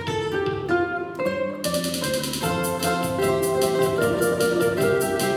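Nothing technically wrong can be heard in this audio. There is no fault to place at any time and no cause to point to.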